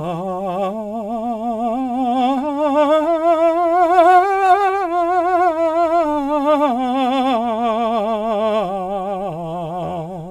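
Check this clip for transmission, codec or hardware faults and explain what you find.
Nothing to flag: no transmission, codec or hardware fault turns up anywhere in this music.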